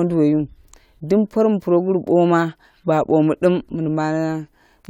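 No technical faults are audible.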